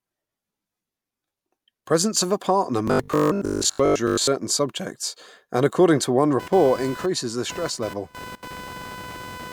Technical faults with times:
2.88-4.29 robotic sound from repeated short buffers
6.39-9.53 computer activity noise

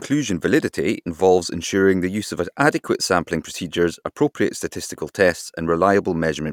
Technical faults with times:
none

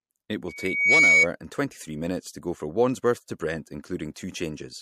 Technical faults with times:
0.48-1.27 loudspeaker feedback squeal
4.14 pre-echo

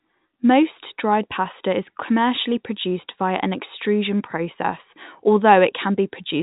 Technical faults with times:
none

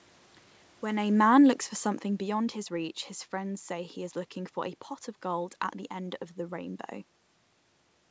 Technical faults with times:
0.84-2.94 automatic gain falling

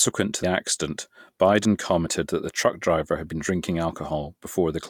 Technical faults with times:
0.43 compressed frames skipped
2.06 compressed frames skipped
3.31 compressed frames skipped

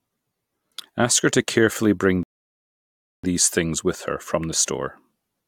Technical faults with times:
2.23-3.24 rebuffering stall

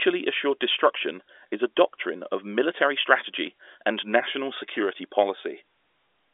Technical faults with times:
none

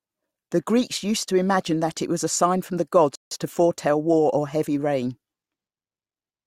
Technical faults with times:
3.15-3.31 rebuffering stall

